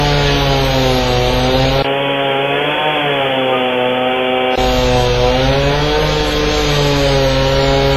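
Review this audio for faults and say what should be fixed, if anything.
Throughout, the audio has a ringing, washy quality, with hiss that swells and fades along with the sound and nothing above 15.5 kHz. This is most likely heavy WMA compression at a low bitrate, around 24 kbps. The transform codec's long blocks smear quantisation noise over tens of milliseconds and zero out weaker components. Unlike a plain low-pass filter, the damage moves with the signal instead of only removing the top end. Encoding at a higher bitrate, or keeping a lossless master, would prevent it.

From 1.82 s to 4.58 s the sound turns dull and boxy, with nothing above 3.4 kHz. A short gap of about 20 ms marks the switch at 1.82 s, and a faint new background noise sits well below the signal. This is likely an input switched to a poorer device, such as a headset's call profile. It differs from codec damage because it starts and ends abruptly while the level stays about the same. 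Locking the input device before recording would prevent it.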